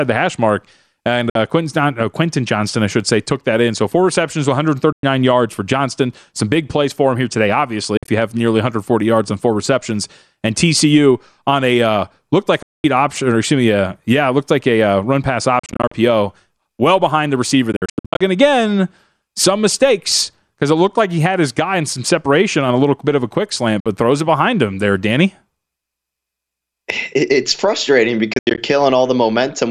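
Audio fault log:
1.30 to 28.58 s, Bluetooth dropout: the speech cuts to silence with abrupt or briefly faded edges at 1.30, 4.92, 7.97, 12.62, 15.59, 17.72, 23.80 and 28.33 s, then picks up further along as if it kept playing underneath. Gaps run from 53 ms to 347 ms of lost audio, and four stretches (8.0, 15.6, 17.7 and 28.3 s) break up into several short holes over up to 480 ms. That's likely packets arriving too late at the headphones and being thrown away.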